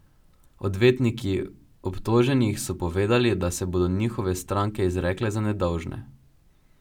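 No technical faults detected.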